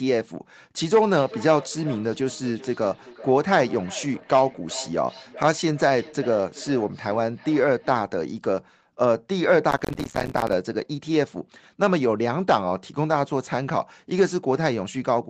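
From 1.13 to 8.12 s there's feedback echo between two devices. A second device in the room is replaying the call, and this microphone picks it up again. The speech comes back roughly every 400 ms, thin and ringy, peaking about 18 dB below the talker.

Then from 9.70 to 10.53 s you get processor overload crackle. The machine kept missing its audio deadlines, dozens of short buffers over that stretch, each dropped out as a tiny silent gap. That's heard as a gritty tearing over the sound until the load eases.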